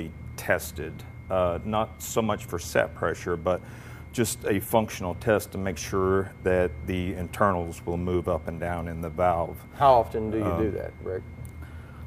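No technical faults can be heard anywhere in this audio.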